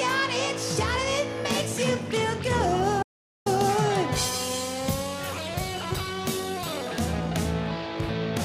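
At 3.03 s the sound cuts out abruptly and stays in an audio dropout to silence until 3.46 s, about 0.43 s of nothing, then resumes mid-flow. The gap is plain silence with no room tone, hiss or decaying tail, which sets it apart from a natural pause or a noise gate closing. The likely cause is a brief loss of input, such as a link or device interruption, while recording continued. Whatever sounded during that stretch is lost.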